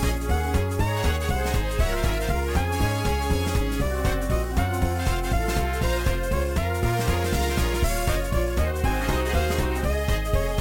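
No audible technical faults are present anywhere in the recording.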